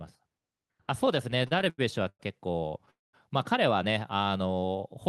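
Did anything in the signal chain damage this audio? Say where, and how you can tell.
Yes. From 1.31 to 2.89 s the speech drags and stutters through 15 short stalls, the longest about 101 ms, adding roughly 373 ms with nothing lost. These are repeated stalls (stutter): late network packets kept emptying the jitter buffer, and the receiver stretched the last sound to fill each wait.

Right after, from 2.91 to 3.15 s, the sound freezes, trailing off into about 190 ms of silence before resuming exactly where it stopped, so a 225 ms gap is inserted. This call audio freeze likely comes from packets held up in the network, draining the jitter buffer.

Between 4.10 and 4.82 s the speech slows to about 84% speed at unchanged pitch, with sounds drawn out by 123 ms in total. This is a jitter buffer slow-down: the receiver repeated single pitch periods to rebuild its reserve.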